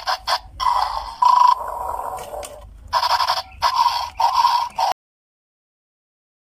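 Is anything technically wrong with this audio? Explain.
Yes. At 4.92 s the audio shows a cut-off end: the sound stops mid-event and the remaining 1.5 s is digital silence. The last stretch of audio was never written out or played back, so nothing reaches the output after that point, and there is no natural decay or fade. On a waveform the signal ends abruptly mid-sound and becomes a flat line. On a spectrogram, every frequency band goes blank in the same instant.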